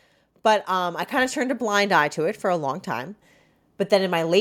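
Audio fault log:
0.29–2.89 s, automatic gain rising. Voice and background swell together by about 5 dB over 2.6 s. The gain control judged the input too quiet and slowly raised its level.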